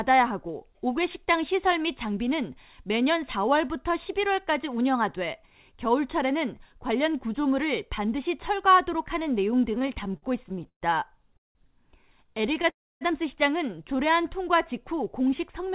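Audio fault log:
9.72–10.84 s, repeated stalls (stutter): the speech catches about fifteen times, the longest hold lasting 127 ms, and roughly 28% of this stretch is the last sound stretched out while the jitter buffer sat empty. Nothing is lost, but the delivery drags and stutters.
11.37–11.57 s, call audio freeze: the speech halts and a 180 ms gap opens, 170 ms of it silent after a brief fading continuation. The likely cause is packets held up in transit, draining the buffer. Speech then resumes exactly where it stopped.
12.27–12.66 s, repeated stalls (stutter): seven short catches, none longer than 12 ms, fill about 15% of this span as the receiver repeatedly runs dry and extends the last sound. The speech sounds choppy and unsteady, though nothing is actually missing.
12.69–13.03 s, call audio freeze: a longer hold of about 0.32 s, roughly 280 ms of it silence, the continued sound fading quickly before going quiet. 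The speech then carries on unbroken, delayed but complete, within the call's band, which ends at 4 kHz.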